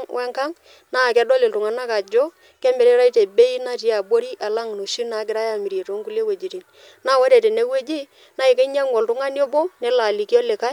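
Nothing stood out as a technical fault on listening to this speech recording.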